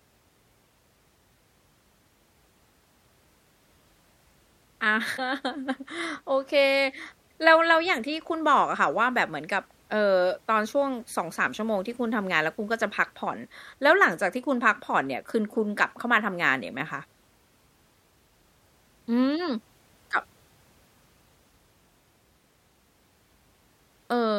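A speech recording with one burst of damaged data in a compressed stream, from 5.14 to 5.19 s: a short glitch where the decoder misreads corrupted frames and resyncs.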